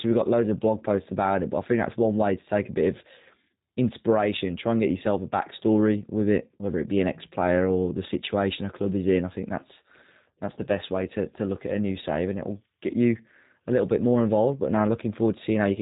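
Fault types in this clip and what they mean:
G.729 codec: Speech is rebuilt from a filter model and sparse pulses. It sounds plainly rough and synthetic throughout, with nothing above 3.8 kHz.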